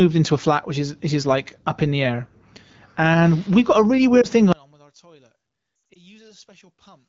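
At 4.21 to 4.27 s, just after "we've got a really", there is a lost AMR speech frame: about 20 ms of audio that failed its checksum. The decoder bridges the gap by repeating the previous pitch and vocal-tract settings at reduced gain, so the sound dips and warbles for an instant. On a spectrogram, the harmonics smear flat and dim across a narrow vertical strip. In the waveform, the envelope shows a brief sag.

From 4.53 s to the end, the level falls by about 32 dB, and the speech is reduced to a faint residue. This is likely one channel inverted: when the two channels are summed, the reversed polarity cancels everything they share, leaving only their small differences. The waveform collapses to a near-flat trace, and the spectrogram fades almost to the noise floor.

Within that quiet stretch, at 5.93 to 6.05 s, there is a second cluster of lost AMR speech frames. About 140 ms of audio is missing, scattered over roughly 200 ms, and the longest run is 80 ms. 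The longest run drops to near silence within two frames. On the spectrogram, this appears as frozen, blurred bands that break off, and the sound is rough or weak where it resumes.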